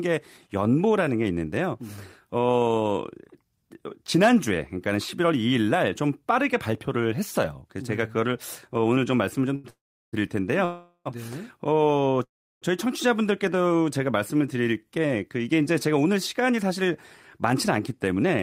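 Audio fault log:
9.55 to 9.66 s, short stall from a late packet: a packet showed up late, the jitter buffer ran dry, and the receiver stretched the last bit of sound by about 86 ms to cover the wait. Once the packet landed, playback picked up right where it left off, so nothing is lost. What you hear is a sound held on too long, with a buzz or a dip in it, and everything after it arrives 86 ms later.
9.70 to 10.15 s, 10.65 to 11.07 s and 12.23 to 12.64 s, call audio freeze: three dropouts where the last sound carries on as a buzz or hiss and fades away. In the first it fades to silence for about 370 ms of its 427 ms. The second runs 408 ms with only about 80 ms of silence. The third runs 381 ms with about 350 ms of silence. The likely cause is packets held up in transit, leaving the buffer empty. Each time, the audio resumes from the same point, so little or nothing is cut, but a gap is pushed into the timeline.
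16.06 to 16.86 s and 17.38 to 18.29 s, jitter buffer speed-up: the speech runs at about 107% and then 108% speed, with the pitch unchanged, so it comes across as hurried. The buffer was holding more audio than it wanted, so the receiver clawed back delay by snipping out tiny chunks a pitch period or so long, again and again. Each stretch trims roughly 70 ms in total.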